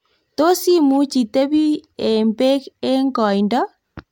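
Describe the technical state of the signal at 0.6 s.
At 0.6 s the speech signal is intact, with no audible fault at that point.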